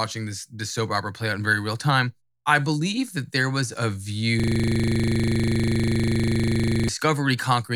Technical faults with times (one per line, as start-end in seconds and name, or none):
4.40-6.89 system hang loop